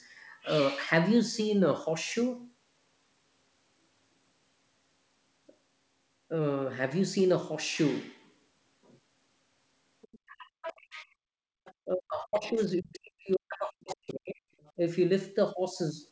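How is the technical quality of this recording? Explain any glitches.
The recording has two recurring glitches, both in the second half of the speech, and both most likely from an echo canceller on a call handling a loudspeaker and a microphone at once. The audio stops near 8 kHz, consistent with the G.722 call path.

Other side's voice leaking through appears briefly at 10.02–10.19, 10.62–10.73, 11.65–11.74 and 14.61–14.72 s. Residual loudspeaker echo was likely left in the microphone signal. It sounds like scraps of a second voice, mostly about 30 dB below the talker, though louder around 10.7 s. A spectrogram shows thin, separate harmonic streaks.

Speech suppressed in double talk hits 10.27–11.27 s and, for longer, 11.85–14.45 s. With both sides talking, the canceller likely pulled down the whole microphone signal. The talker's voice sinks by up to roughly 40 dB. The waveform shows collapsed envelope gaps and the spectrogram shows dark blank patches.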